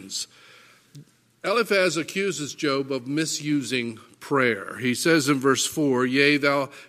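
No technical faults can be heard anywhere in this audio.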